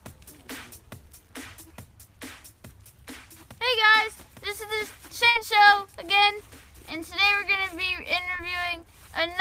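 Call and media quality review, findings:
Burst of packet loss, 5.29 to 5.37 s. Jitter buffer/decoder concealment. About 60 ms of audio never arrived. Roughly 55 ms filled by extending the preceding sound with a falling level, heard as a held, fading tail. Playback then resumes further on, with the intervening audio missing.

Short concealed packet loss, 8.37 to 8.41 s. Decoder packet-loss concealment. About 20 ms lost, roughly 18 ms of it synthesised from the previous sound and crossfaded back into the real signal. Audible as a brief smear or wobble.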